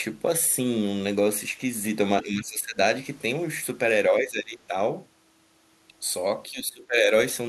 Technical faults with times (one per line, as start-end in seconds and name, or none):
2.22-2.79 speech suppressed in double talk
4.09-4.74 speech suppressed in double talk
6.48-7.12 speech suppressed in double talk